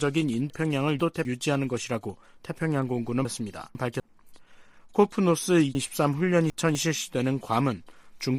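Three stretches of chunks out of order: 0.5 to 1.25 s, 3.25 to 4.0 s, and 5.75 to 6.75 s. A quarter-second block turns up two (then three) slots late, so the sound jumbles briefly, with three hard joins each time.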